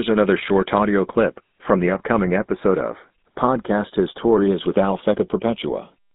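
Throughout the speech, a slow flanging sweep comes from channels drifting apart: separate clocks, roughly 50 ppm off, let the inter-channel delay creep toward a fraction of a millisecond.

Also throughout, a plainly audible buzzy, gravelly roughness with nothing above 3.8 kHz points to the GSM full-rate codec, with its pulse-driven vocal-tract model squeezing speech into a narrow telephone band around 13 kbps.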